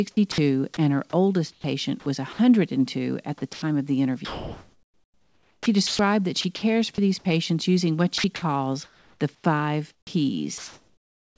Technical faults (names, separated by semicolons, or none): onset clipped by the voice detector; sound dropped by the voice detector; sound chopped by the voice detector; comfort noise in place of the background